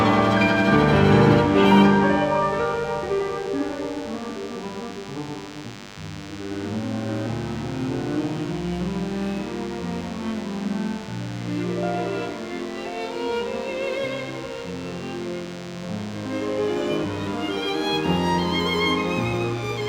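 A thin, steady buzz runs under the whole clip, about 20 dB below the sound: DECT cordless phone buzz, its 100 Hz radio bursts rectified into the audio circuit.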